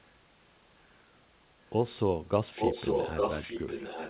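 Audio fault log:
2.55 to 4.10 s, echo leak: from 2.55 s to the end, a second copy of the speech runs behind the original, trailing by about 0.86 s and roughly as loud as the speech itself, so the two overlap and smear together. The likely cause is an echo canceller that failed to remove what a loudspeaker on the far end fed back into its microphone, and that copy was returned down the narrowband call path, which stops near 4 kHz.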